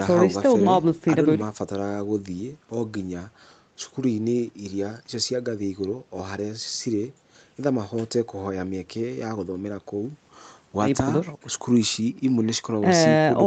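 No technical faults can be heard in this speech. The call path audibly limits the top of the band to about 8 kHz, with the usual coding texture typical of an Opus call codec at a modest bitrate.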